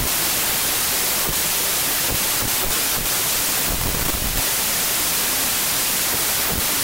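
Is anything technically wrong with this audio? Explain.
Yes. Throughout the speech, a wrong sample width fault, consistent with packed 24-bit data read as 16-bit, buries the voice in loud noise, slowed to two-thirds speed and lower pitch.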